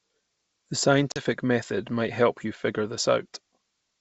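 At 1.12 s, packet loss on an ADPCM call cuts a sharp-edged 40 ms blank column into the spectrogram. The out-of-step decoder brings the speech back slightly distorted, settling by 1.23 s before "method might help you".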